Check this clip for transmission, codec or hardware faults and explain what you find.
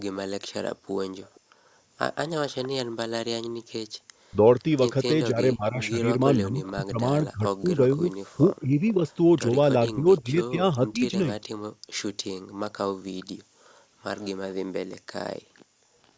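Two call-path faults affect the speech, both pointing to a loudspeaker endpoint whose echo handling is struggling.

Echo leak, from 1.22 to 2.69 s and again from 6.65 to 14.3 s: a faint copy trails the speech by 474 ms, roughly 25 to 30 dB down, likely because the echo canceller left residue. The fixed lag separates it from room reverb.

Speech suppressed in double talk, between 4.3 and 11.15 s: the talker dips by up to about 25 dB, totalling around three seconds, likely because the canceller ducked overlapping speech. The losses are dips, not a delayed copy.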